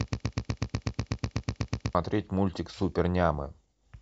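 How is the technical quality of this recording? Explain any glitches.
The recording opens with a glitch. From the very start until 1.95 s, a broken-record loop repeats one 0.12 s fragment back to back, likely from a stalled player or stream resending its last buffer, so the audio meant for that stretch is lost.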